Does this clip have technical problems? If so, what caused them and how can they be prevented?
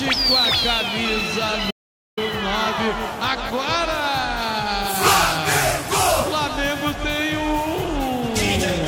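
Yes. An audio dropout to silence runs from 1.71 s to 2.17 s, removing about 463 ms of sound. The audio stops abruptly mid-flow and returns just as suddenly, and the gap is silent, with no room tone or noise floor at all. That complete emptiness sets it apart from a natural pause or a noise gate, which leave some background or fade gradually. The likely cause is the input signal briefly vanishing, through a loose connection, a dropped wireless link or a momentary mute, while recording carried on writing silence. Securing cables, monitoring wireless links and watching input meters during capture helps prevent it.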